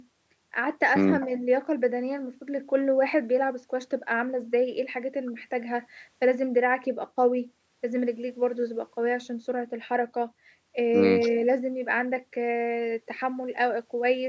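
No technical faults are audible.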